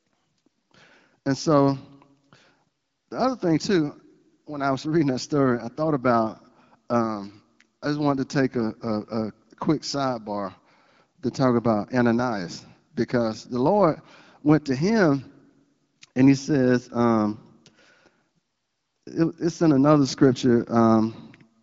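No technical faults can be heard anywhere in this speech recording, which comes through the AMR wideband (HD Voice) codec at 12.65 kbit/s.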